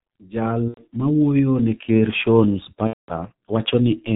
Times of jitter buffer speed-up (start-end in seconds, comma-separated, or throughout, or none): none